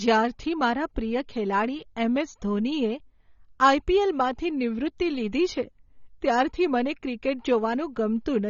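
From start to end the speech is band-limited, with nothing above 7 kHz, and it sounds dull and smeared, with a warbly, fizzy edge on sibilants and held sounds. This is likely AAC compression, with quantisation damage that fits a low bitrate around 24 kbps.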